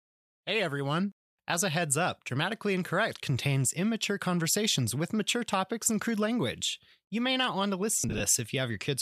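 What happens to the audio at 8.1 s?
Lost LE Audio frames from 8.00 to 8.20 s, just after "may not want to": about 100 ms drops out in gaps of up to roughly 40 ms. The LC3 decoder refills each gap with the last spectrum under random signs, smearing the speech into grainy noise.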